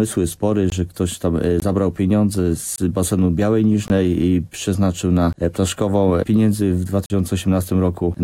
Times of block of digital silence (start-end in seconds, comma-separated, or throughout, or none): 0.70-0.72, 1.60-1.62, 2.76-2.78, 3.88-3.90, 5.33, 7.06-7.10